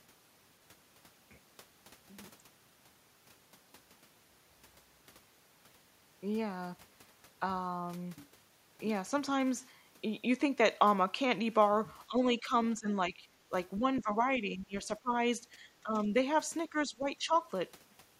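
An echo canceller likely losing track during double talk causes speech to be suppressed in double talk from 12.07 to 15.13 s. With both sides talking, it could not tell the local talker from the loudspeaker echo and turned everything down. The speech dips by up to about 15 dB in patches adding up to roughly a second, sounding chopped and pulled back rather than steadily quiet.

Inside that stretch, from 13.98 to 14.02 s, the same canceller likely failed to scrub the far end from the microphone, and the other side's voice leaks through. It is a brief scrap sitting about 15 dB under the local speech, heard as a faint blip.

The suppression returns from 15.53 to 16.13 s, with about a fifth of a second held down, and from 16.70 to 17.33 s, with under half a second affected. Both times the speech drops by up to about 15 dB in short gaps, likely while the far side is active.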